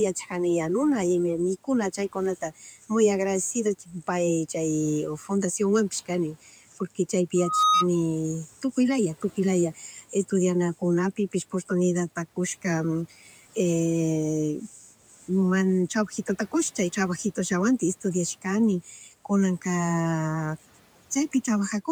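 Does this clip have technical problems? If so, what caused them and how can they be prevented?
Yes. The noise suppressor cuts into the speech seven times: 2.41–2.90, 3.79–4.08, 6.46–6.79, 9.75–10.13, 14.68–14.88, 15.11–15.28 and 18.84–19.12 s. For example, one cut comes right after "mikuna chaykuna muy agradecicido" and ends just before "pay chay fundaciònwanpish", and another sits just before "porque chaypi". Each time, about a tenth to a fifth of a second of quiet speech gets treated as noise and pulled down by about 8 to 11 dB, so endings sound swallowed. That happens even though the room noise sits about 26 dB under the speech. Easing the suppression strength or raising its threshold would stop it.

There's also a loudspeaker feedback squeal from 7.36 to 7.87 s, right after "porque chaypi". The mic is picking up the speaker it feeds, and at 1.2 kHz the loop gain goes past one. That tone swells over roughly a third of a second to about 5 dB above the speech before it drops away. 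Keeping the mic out of the speaker's coverage, turning the monitor down, or notching 1.2 kHz would prevent it.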